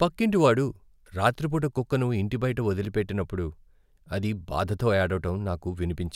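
No technical faults are audible.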